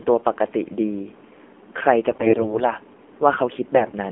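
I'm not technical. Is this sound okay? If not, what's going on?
No. The whole clip carries the sound of the AMR narrowband mobile codec, an old phone-call format. Only the middle of the sound comes through, roughly 250 Hz to 3.4 kHz, so it's muffled. The speech is also clearly buzzy and synthetic, not just dull like a cheap microphone.

On top of that there are AMR bit errors from 2.10 to 2.74 s and again from 3.76 to 3.92 s. Damaged data makes the voice hoarse, scratchy and gargly there, yet pitch and loudness hold steady, unlike a dropout, which goes silent.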